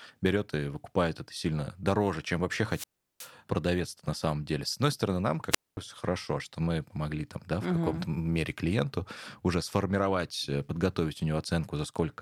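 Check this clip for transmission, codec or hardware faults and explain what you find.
Two wireless microphone squelch dropouts interrupt the speech. The first runs from 2.69 to 3.32 s, after "сильно дороже чем вообще" and before "продавец на самом деле", with a mute of about 0.37 s. The second runs from 5.50 to 5.77 s, after "одной стороны нам" and before "хорошо что мы помогли", muting for about 0.23 s. Each time the FM radio link weakens, hiss swells, and the receiver's squelch closes, leaving a near-silent hole before the signal returns. The rising static ahead of each gap separates this from a digital packet dropout, which cuts out abruptly without any noise build-up.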